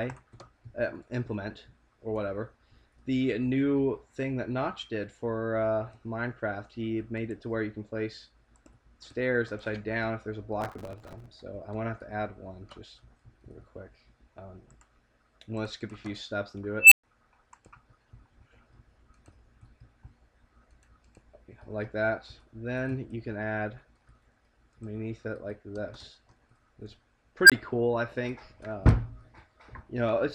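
From 10.61 to 11.30 s, processor overload crackle: dozens of few-millisecond buffers miss their deadlines in a row and repeat stale audio, producing a gritty, tearing crackle. An unstable filter twice lets its recursive output run away: at 16.80 s a tone of about 3 kHz swells over 112 ms, clips, then drops into 120 ms of silence. At 27.43 s a tone of roughly 1.5 kHz does the same within 65 ms, followed by a 20 ms cut-out.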